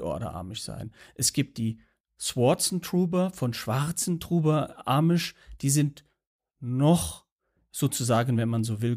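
Nothing stood out as a technical fault on listening through the speech.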